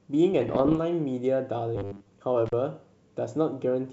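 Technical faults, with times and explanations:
0.32 to 0.81 s, bit errors on an ADPCM link: the speech turns rough with scattered pops and little level jumps. With around half a percent of bits flipped, each bad bit throws off the decoder's step size and predictor, so the damage smears on for a few milliseconds instead of staying a single click.
1.76 to 2.13 s, robotic sound from repeated short buffers: the speech goes to a stiff, metallic buzz sitting at 100 Hz while still loosely tracking the words. Most of that stretch is looped 10 ms chunks standing in for skipped audio, likely from new data arriving too rarely.
2.46 to 2.53 s, intermittent contact: the sound drops out for about 33 ms, with crackle on either side of the gap and just faint hiss left while it's open. That's a loose plug or cable breaking the connection for a moment, then catching again.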